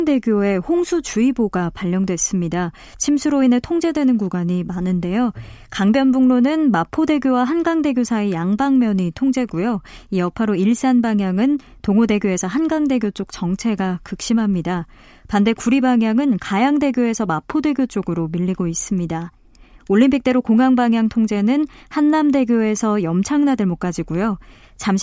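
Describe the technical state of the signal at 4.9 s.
At 4.9 s the speech signal is intact, with no audible dropout, clipping, distortion or other technical fault.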